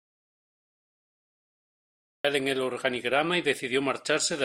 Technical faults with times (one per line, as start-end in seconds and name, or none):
0.00-2.25 audio dropout to silence